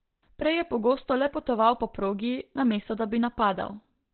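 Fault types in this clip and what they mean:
Opus compression: Muffled, hoarse speech with nothing above about 4.3 kHz, likely Opus speech-mode coding at roughly 12 kbps; not MP3-style swirling holes.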